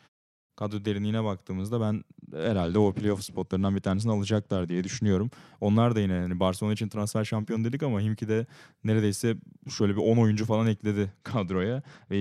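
From 2.18 to 5.08 s, and again from 11.09 s to the end, a Bluetooth SBC bit pool drop dulls the speech's treble and adds gritty noise. That fits the bit pool falling from 31 to 13, about 94 kbps. Unlike a plain low-pass, grain rises too.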